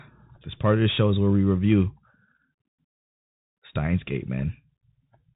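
Throughout the speech, the signal has passed through the Bluetooth CVSD headset codec, a one-bit delta modulator whose adaptive step lags fast changes. Everything above about 4 kHz is missing, sibilants turn gritty, loud bright moments distort audibly, and a grainy hiss sits underneath.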